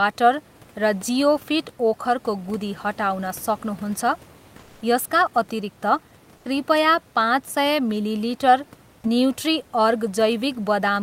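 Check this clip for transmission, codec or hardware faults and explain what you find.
One transmission fault stands out in this speech recording. From 6.37 to 6.45 s, for about 80 ms, comfort noise takes the place of the background. The real room noise, which sits around 30 dB below the speech, gives way to a smooth, featureless hiss about 5 dB quieter. The likely cause is discontinuous transmission in the Opus codec: the sender stops sending during a pause, and the receiver fills the gap with synthetic noise shaped roughly like the room. On a spectrogram the textured background briefly becomes an even, uniform wash. The waveform shows a short, slightly lower, flatter stretch before the original noise floor returns.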